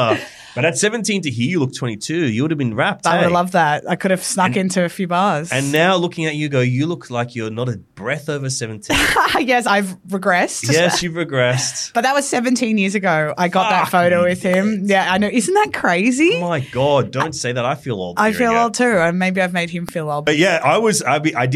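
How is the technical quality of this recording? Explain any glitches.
The recording has two brief glitches. Electrical switching spikes occur at 14.54 s and 19.89 s. A nearby switch, motor or static discharge likely arced and the audio line picked it up, giving each a sharp snap on top of the sound, peaking only a few dB below full scale.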